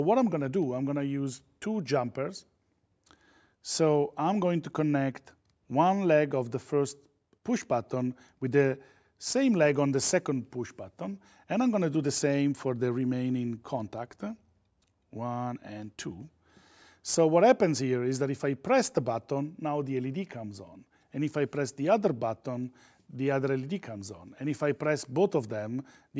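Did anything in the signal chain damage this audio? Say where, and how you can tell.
No, nothing in the signal chain has damaged this audio. Listening through, no stage between capture and playback leaves any audible mark on the sound.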